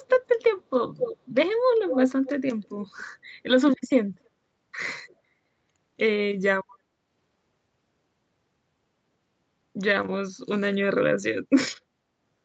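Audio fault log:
0.08 to 5.16 s, echo leak: short delayed copies of the speech at 0.08, 0.39, 0.97, 1.87, 2.25, 2.63 and 5.08 s, trailing by about 260 to 270 ms. Loudest near 1 and 1.9 s, barely there later. Likely a loudspeaker on the far end whose echo canceller let some through.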